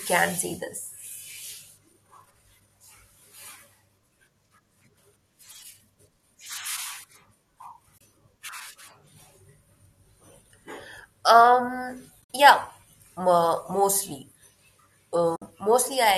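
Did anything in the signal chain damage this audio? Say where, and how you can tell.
Yes. At 7.98 to 8.01 s, 12.22 to 12.30 s and 15.36 to 15.42 s the speech briefly drops into soft-edged holes of about 30, 70 and 60 ms, fading out and back in. That is AAC frame loss with muting, a network-stage fault. Packets went missing, the decoder zeroed the spectrum of those frames, and the overlapping windows smoothed the edges. The gap lengths fit 10 ms frames, likely from low-delay AAC, whose light coding roughness is not itself a fault here.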